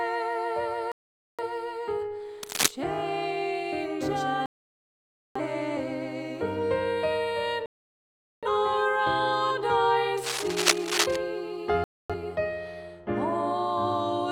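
At 0.92 s the sound cuts to silence and stays gone until 1.44 s. This is a digital broadcast dropout: the receiver stopped getting frames it could decode, muted its output, and resumed only when valid frames arrived again. About 0.47 s of the programme never reaches the listener. Between 2.43 and 2.71 s a dense, uneven scratching rides over the sound at about the same level as the audio itself. That is cable scratch noise, likely from a worn cable, connector or control being moved so its contact resistance jumped around rapidly. The next dropout silences the audio from 4.46 to 5.41 s, with about 0.9 s of material missing. A third mutes it from 7.66 to 8.48 s, losing about 0.77 s. From 10.17 to 11.16 s the scratching returns, again roughly as loud as the sound and lasting about a second. It is the same cable scratch noise, likely another worn contact shifting under movement. The last dropout opens a short hole from 11.84 to 12.15 s, with about 0.26 s of programme lost before the signal comes back.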